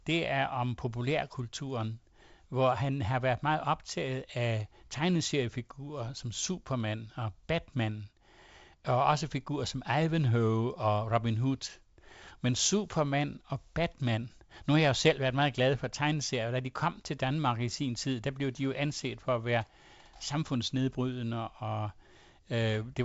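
Nothing here counts as a technical fault: it's a speech clip that has gone through ordinary G.722 wideband telephone coding at 56 kbit/s, so the top end stops at about 7.7 kHz and there's the light texture you'd expect from that codec, with nothing else going wrong.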